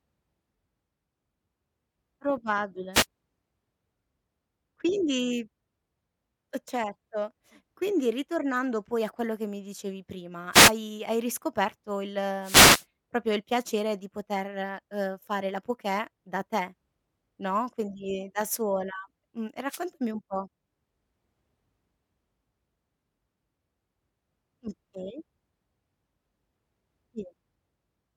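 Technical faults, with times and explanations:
2.93–3.06 s, 10.52–10.72 s, 12.41–12.85 s and 19.68–19.81 s, wireless microphone noise hit: brief swishes of static rise over the speech as the analogue FM radio signal fades, likely from reflections cancelling it. Unlike a digital dropout, the speech is masked by hiss rather than cut to silence. The longest hit lasts about 0.44 s.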